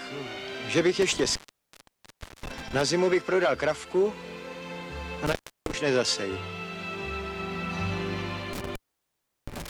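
Intermittent contact cuts the sound out for about 1.12 s near 1.02–2.81 s, 0.31 s near 5.26 s, and 0.72 s from 8.53 s onward. Crackle at each edge and faint hiss, rather than digital silence, point to a loose connection.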